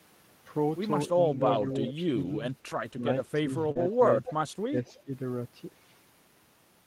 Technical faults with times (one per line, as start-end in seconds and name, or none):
1.15-2.39 speech suppressed in double talk
1.61-1.67 lost packet rebuilt from error correction
1.88-1.93 echo leak
2.71-2.81 lost packet rebuilt from error correction
2.99-3.07 speech suppressed in double talk
3.48-4.24 speech suppressed in double talk
3.71-3.77 short concealed packet loss
3.75-3.81 lost packet rebuilt from error correction
4.25-4.33 echo leak
4.68-5.12 speech suppressed in double talk
4.86-4.93 echo leak